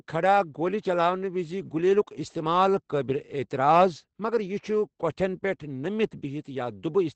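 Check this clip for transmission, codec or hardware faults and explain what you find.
The clip has one fault, present throughout: Opus voice compression at a low bitrate. The encoder appears to be running in its SILK linear-prediction mode with a wideband setting, and the degree of damage points to a bitrate around 12 kbps. Nothing survives above about 8.7 kHz, so the speech sounds muffled. With so few bits, the excitation signal driving the predictor is coded coarsely, which makes the speech plainly hoarse and slightly robotic from start to finish.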